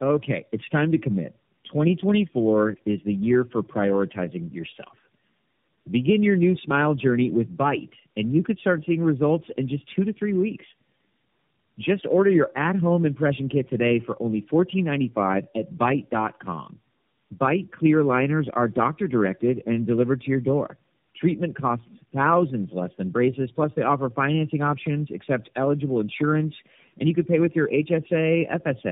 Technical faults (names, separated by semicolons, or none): tandem speech coding